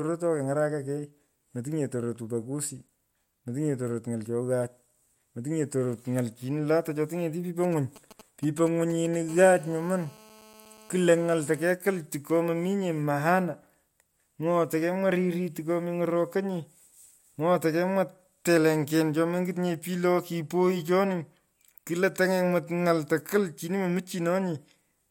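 Right after "cho tingeti pipo", at 7.64 s, you get GSM signalling bursts running until about 9.16 s. A 2G handset close by is handshaking with the network, firing off short groups of radio bursts, and the audio circuitry rectifies them into sound. It comes across as a galloping dit-dit-dit of brief 217 Hz buzzes, sitting roughly 20 dB under the speech.

Then at 9.29 s a phone settles into a call, and the GSM phone buzz takes over, lasting until 11.72 s, just before "tiko mominye maana". Now the handset transmits continuously at its 217 Hz burst rate, so the rectified interference becomes a steady, hard, raspy buzz with lots of harmonics and no connection to the speech underneath. It sits about 26 dB below the speech.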